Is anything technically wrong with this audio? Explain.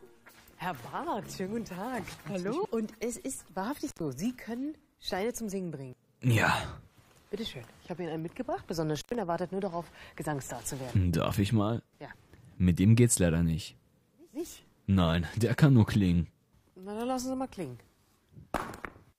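Yes, there are two kinds of fault. The first is an intermittent contact: a loose cable or plug briefly lost its connection twice, from 3.86 to 4.00 s and from 8.96 to 9.15 s, opening for about 0.1 s each time. Both times the sound drops out abruptly, with crackle at the edges where the contact breaks and remakes, and faint hiss remains while the line is open.

The second is an adaptive stream switching to a lower bitrate. From 14.17 s to the end, the player moved to a cheaper encoding. The change in character suggests a step from plain AAC at around 96 kbit/s down to HE-AAC at around 32 kbit/s. There is no gap at the switch, but the quality drops at once. Above 16.4 kHz the sound is empty, the top end drops away, and coding artefacts become noticeable.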